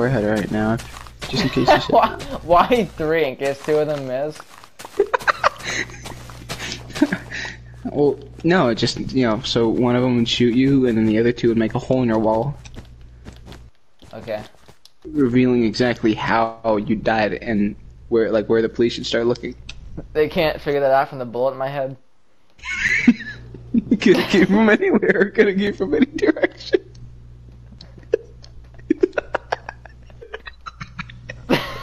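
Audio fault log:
22.88 s and 25.67 s, block of digital silence. The sound drops to silence and returns with no fade. The gaps last 5.8 ms and 2.9 ms, which fits 256- and 128-sample blocks left unfilled. Both gaps are too short to be heard as silence, so each comes across as a tick or dip.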